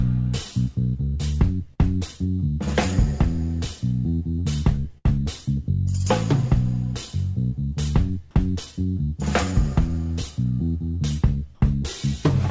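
Around 1.74 to 1.80 s there's a short concealed packet loss. About 40 ms of audio didn't reach the decoder in time, so the receiver covered the hole by stretching out what it had just played for roughly 41 ms before blending back into the real signal. You hear it as a quick smear or wobble.

Then at about 4.98 to 5.19 s comes a burst of packet loss, a longer run of around 60 ms that never arrived in time. The receiver carried the last sound forward for about 64 ms and let it fade, so you get a held buzz or dying hiss rather than the real content. When the audio picks up again it lands slightly further on, with about 14 ms skipped. Through all of this the call path itself sounds like a 64 kbps G.722 link, with nothing above 8 kHz.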